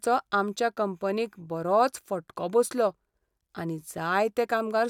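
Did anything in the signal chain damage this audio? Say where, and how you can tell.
No, nothing in the signal chain damaged this audio.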